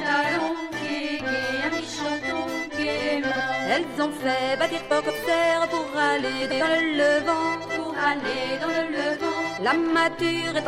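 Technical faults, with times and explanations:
3.30–3.41 s, 4.90–5.10 s and 6.42–6.61 s: frames out of order. In each stretch two neighbouring blocks of audio play in swapped order, about 46 ms each in the first and about 93 ms each in the other two, which fits two and then four codec frames per block. The sound turns into a brief garbled flutter. Unlike a dropout or a stutter, nothing is missing or repeated, and the timing afterwards is unchanged.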